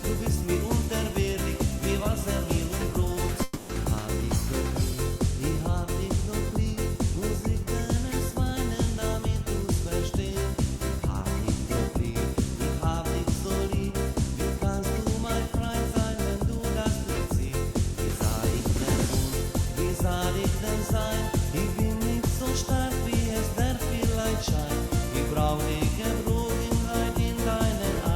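At 3.43 to 3.71 s the audio turns into a fading buzz or hiss, then returns with 0.26 s missing, likely a long network dropout.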